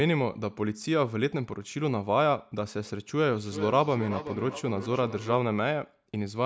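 From 3.34 to 5.39 s there's feedback echo between two devices: a second device in the room replays the speech, that microphone picks it up again, and the echo canceller misses it, so the speech returns roughly every 400 ms, peaking about 11 dB below the direct sound.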